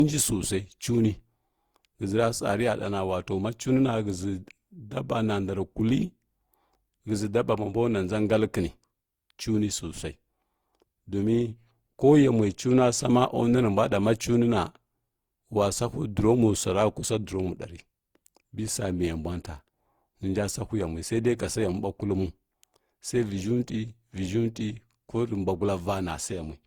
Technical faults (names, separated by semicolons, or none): generation loss